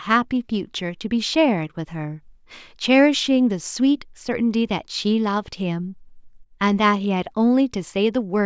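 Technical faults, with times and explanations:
No technical faults are audible.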